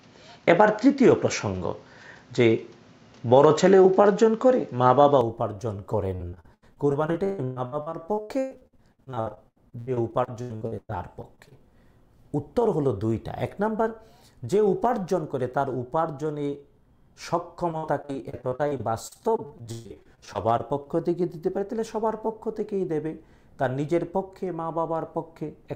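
From 0.0 to 5.21 s the sound is band-limited, with nothing above 7.6 kHz, a faint added noise floor roughly 40 dB down and a level shift of roughly 5 dB, with no silence at the change. This is likely an input switched to a poorer device. From 6.15 to 11.53 s, and again from 17.71 to 20.87 s, repeated packet loss produces choppy, robotic sound. Dozens of short gaps, the longest 143 ms and 131 ms, are patched by extending the previous sound, concealing about 35% and 26% of each stretch.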